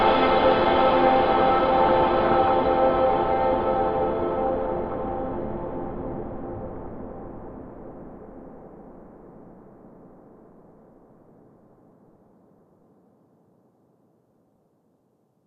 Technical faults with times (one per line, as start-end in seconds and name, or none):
1.89-2.53 DAB burbling
4.47-4.97 DAB burbling
6.67-7.01 DAB burbling
14.38-15.00 DAB burbling